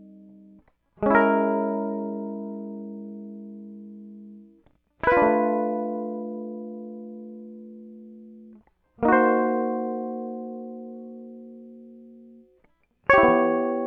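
No technical faults are audible.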